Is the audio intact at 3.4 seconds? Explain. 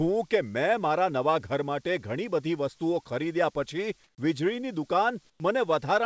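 Yes, the audio is intact at 3.4 seconds, with nothing interrupting or damaging the speech at that moment as it passes through the WebRTC call path.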